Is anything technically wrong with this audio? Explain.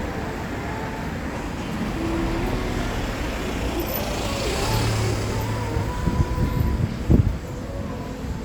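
No technical faults are audible.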